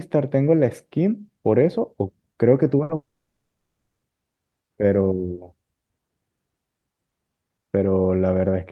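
At 2.83 s the speech breaks for about 90 ms, until 2.92 s. This is a burst of packet loss. Several consecutive packets never arrived in time to play. The receiver covered the hole by extending the last sound and lowering its level. That fill lasts about 60 ms and is heard as a brief held sound that dims. About 60 ms of speech is gone when the audio resumes.

Only 30 ms later, at 2.95 s, the sound cuts out again and stays out until 4.06 s. The cause is likely a long network dropout, with no audio reaching the receiver for over a second. The concealment again stretches the last sound and fades it, and it then gives way to silence for roughly the final 0.7 s. Speech returns at 4.06 s with about 1.08 s skipped.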